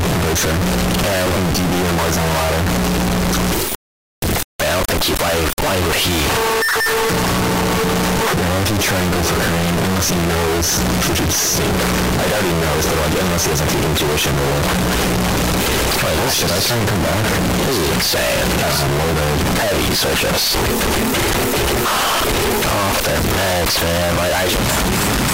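Throughout, 32-bit float samples were likely read as 32-bit integers, so sign and exponent bits set each sample's level. This float read as integer squares off the waveform at an almost fixed, high level, making it very loud and harsh, with background noise as loud as everything else.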